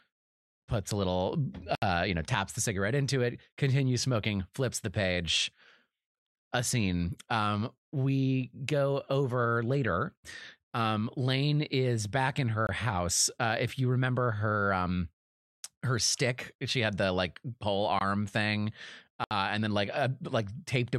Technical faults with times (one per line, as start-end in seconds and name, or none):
1.75-1.82 block of digital silence
12.67-12.69 block of digital silence
17.99 block of digital silence
19.24-19.31 block of digital silence